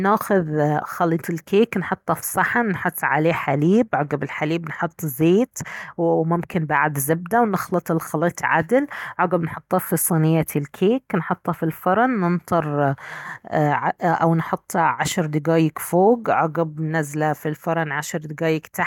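No technical faults can be heard anywhere in this speech recording.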